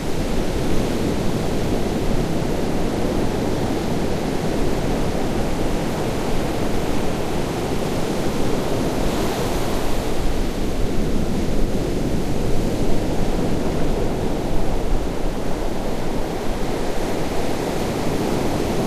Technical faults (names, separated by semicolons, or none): none